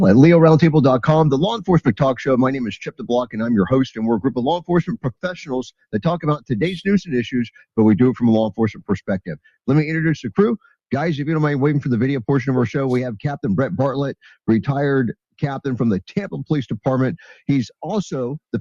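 Throughout, the level pumps and thins by around 10 dB, held sound sinking while attacks survive: a noise suppressor applied to music or sounds, treating steady content as noise. Deeper dips, sound cut by the noise suppressor, pull sustained passages down sharply at 1.86–2.02 s (about 14 dB), 2.63–3.4 s (about 21 dB), 3.91–4.38 s (about 16 dB), 4.58–5.31 s (about 20 dB), 5.92–6.52 s (about 19 dB), 8.5–8.91 s and 9.07–9.48 s (about 18 dB each), where the suppressor cuts these stretches harder than the rest.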